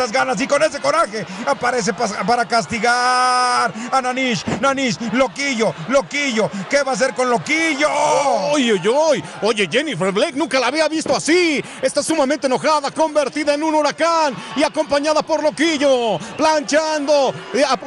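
No faults can be heard anywhere in this audio.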